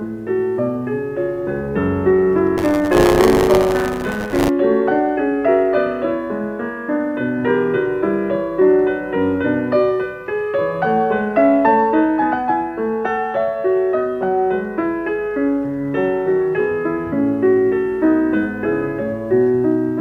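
From 2.57 s to 4.49 s there is buffer tearing. The writer and reader of the playback ring buffer have drifted out of step, so they cross inside each period. About a tenth of every buffer holds stale audio, roughly 30 ms old, with a hard join at each edge. Those joins repeat at 100 Hz, which points to a 10 ms period. The result is a robotic buzz riding on the sound, present only while signal plays.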